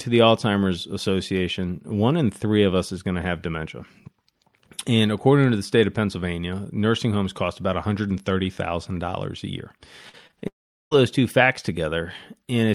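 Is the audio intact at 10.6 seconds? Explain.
No, 10.6 s falls inside a long network dropout from 10.48 to 10.97 s. The last sound briefly continues as a fading buzz, then about 400 ms of silence follows, likely because incoming audio stopped arriving. About 440 ms is lost before "two facts".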